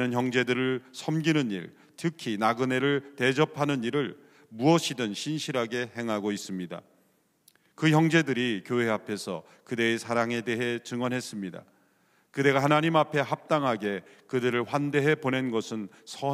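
No technical faults can be heard anywhere in the recording.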